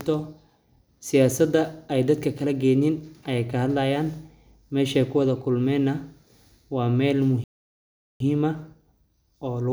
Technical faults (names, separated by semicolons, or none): playback stall